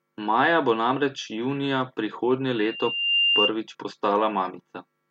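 From 2.54 to 3.52 s a loudspeaker feedback squeal rises at 2.8 kHz, swelling over roughly 0.7 s to about 5 dB above the speech. The microphone re-amplifies its own loudspeaker output there. A single steadily growing pitch marks it apart from a fixed interference whine.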